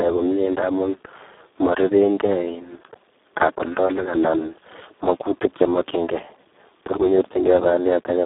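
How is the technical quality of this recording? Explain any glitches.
The recording is heavily degraded throughout by Speex codec damage. From start to finish the speech sounds hoarse, buzzy and close to robotic, confined to a narrow telephone band of roughly 150 Hz to 3.6 kHz with nothing above 3.8 kHz. Speex models speech as a filtered excitation signal, and here so few bits go to that excitation that its detail collapses into noise, which fits a very low setting around 4 kbps.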